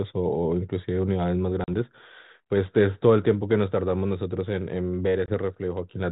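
At 1.64 s the speech drops into a hard-edged silent hole. This is packet loss on an ADPCM call, with about 40 ms missing, likely two packets. The decoder's adaptive predictor and step size lose track of the sender's. When sound resumes, it comes back slightly distorted, then settles by 1.75 s. A shorter gap at 5.26 s, about 20 ms, does the same and settles by 5.34 s. The light coding texture fits 32 kbit/s G.726.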